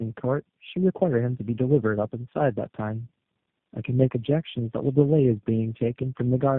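Throughout, the speech sounds rough, muffled and warbly, with nothing above 3.6 kHz. This is tandem speech coding: G.729A at 8 kbit/s, then AMR-NB at 6.7 kbit/s, then G.729A again, with G.711 mu-law links between, so each coder re-encoded the previous one's damage.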